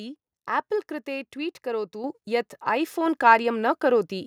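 Speech, with a microphone volume stepped up at 2.04 s: the level rises abruptly by about 6 dB, and the voice and the background noise jump together rather than the speaker simply getting louder. Because everything ahead of the microphone's input stage rises by the same amount in a single step, this points to the call software judging the input too quiet and raising the device's gain at once, not easing it up gradually.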